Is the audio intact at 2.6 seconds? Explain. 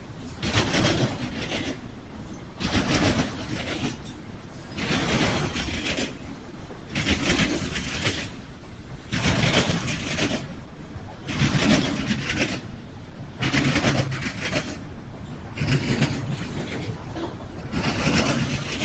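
No, not quite. The moment sits right at the end of a stretch where the noise suppressor cut this sound, from 1.88 s to 2.59 s. The suppressor took the sustained material for noise and pulled it down by up to about 4 dB, so it sinks and its decay shortens before level returns just as 2.6 s arrives. On a waveform the envelope dips across that 0.7 s; a spectrogram shows the steady partials fading toward the background, then filling back in.

Underlying this, a noise suppressor built for speech and applied to music or sounds is active the whole time. It treats held tones, ambience and tails as noise, so gain swings by around 10 dB, with onsets getting through while sustains sag, giving a pumping, thinned character. The waveform shows uneven, breathing envelopes; the spectrogram shows sustained bands flickering in density between attacks.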